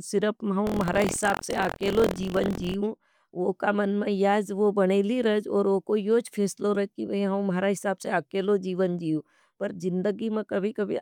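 Speech with buffer tearing from 0.65 to 2.76 s, heard as a steady robotic rattle at 43.1 Hz riding on the voice. The writing program and the playback hardware have slipped within the ring buffer, so about a tenth of every period replays audio roughly 70 ms old, with hard joins on both sides. The rate fits a 1024-sample buffer. Unlike an underrun, there are no silent gaps. Stale audio fills the torn slice, and the buzz follows the signal.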